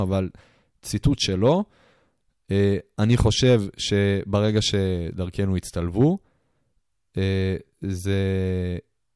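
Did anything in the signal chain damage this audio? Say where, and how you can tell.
No, nothing in this speech recording stood out as damage from any stage of the chain when I listened to it.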